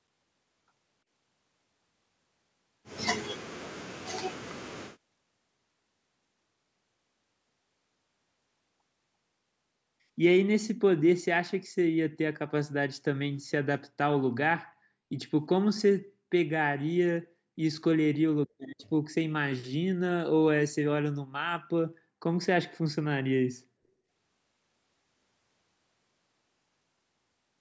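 At 18.78 to 18.86 s a brief echo leak appears: a faint, delayed scrap of the speech returns about 343 ms later, roughly 30 dB below the voice, likely residue a loudspeaker-side echo canceller missed. On a spectrogram it shows as a weak copy of earlier harmonics.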